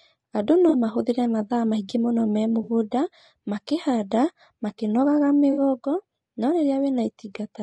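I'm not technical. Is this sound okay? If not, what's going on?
No. Two problems can be heard in this speech clip.

The first runs the whole way through. The voice sounds rough and grainy, with a hiss between the tones and a dull, slightly artificial top end. This is likely low-delay AAC compression, the kind used for video calls. It squeezes the sound into very short chunks to avoid lag. Those short chunks can't capture the voice's pitch cleanly, so detail is lost and replaced with noise.

The second is AAC frame loss with concealment. Small pieces of the audio went missing. The player filled each gap by guessing from the sound just before it. You hear this as a brief smeared, noisy blur at 0.69 s and 2.63 s, each lasting about 40 ms. At 5.52 s it lasts about 60 ms. The gaps are too short to fall silent, so they come across as quick smudges.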